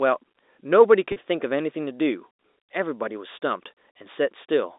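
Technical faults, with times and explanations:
1.12 to 1.16 s, packet loss with pitch repetition: 40 ms of audio goes missing, which fits two lost 20 ms packets. The receiver bridges the gap by repeating the last pitch period, so the sound briefly holds as a slightly buzzy, sustained tone before resuming.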